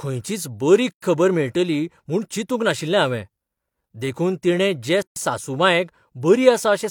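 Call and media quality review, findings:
Gap at a join of encoded pieces: separately encoded segments spliced without trimming encoder delay and last-frame padding, so silence opens in the speech at 0.91–1.02 s (113 ms, after "खंयचीच बरी", before "खबर मेळटली म्हूण चिंतूक") and 5.02–5.16 s (139 ms, after "तिणें जे"). Edges codec-smeared; speech resumes where it stopped. 4 s spacing points to 4 s segments.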